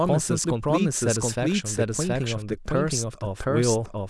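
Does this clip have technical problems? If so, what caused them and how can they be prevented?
Yes. A doubled audio track runs throughout: a full-band copy of the speech trails the original by roughly 0.7 s at about equal level, likely from a second, slower capture path being mixed in. On a spectrogram every pattern repeats 0.7 s later, crisp and without any decay tail. Prevent it by routing each source through a single capture path and muting any duplicate monitoring or loopback input.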